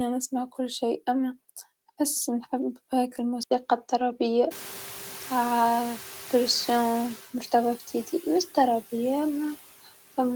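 Throughout this speech recording, a noise suppressor works band by band and pulls the steady background down by about 9 dB, so the residual noise dips between phrases and swells under them. At 3.43 s, just after "نحب هاكا", the input likely switches to a poorer device: there is an 80 ms gap, and from then to the end the band is narrower. The sound turns duller and narrower, though the loudness stays about the same and the new device's background noise sits far below the voice. At around 4.5 s the room noise jumps by about 23 dB, to roughly 16 dB under the speech, and the suppressor's noise estimate lags. The noise comes through with little reduction at first, then sinks gradually by about 8 dB over 2.71 s, settling by 7.21 s.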